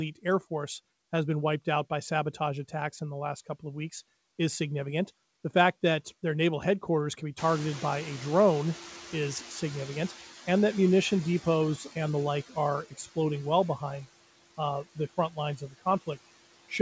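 From the start, noise suppressor artifacts run through the whole clip. The background is pulled down by about 14 dB, so it dips between phrases and swells back under the speech. Unlike a gate, it never drops to silence.

At about 7.5 s the room noise jumps by roughly 22 dB, and from 7.37 to 10.17 s, between "naval headquarters can be" and "and that munition depots", the noise suppressor is catching up. Its noise estimate lags, so the louder background first comes through less reduced and then sinks over about 2.8 s, ending near 8 dB lower. The gradual slide gives it away. A steady-state artifact would not trend downward like this.

From 15.57 to 15.83 s, speech is cut by the noise suppressor. It mistakes part of the speech for noise, and about 150 ms of it drops by as much as about 16 dB, so it sounds swallowed. A dropout would be an abrupt hole, but this fades with the background. The call path has nothing above 8 kHz, which fits G.722 at 64 kbps.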